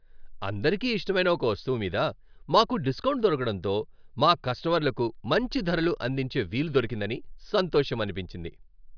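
No dropouts, distortion, noise bursts or timing errors turn up anywhere in this speech recording.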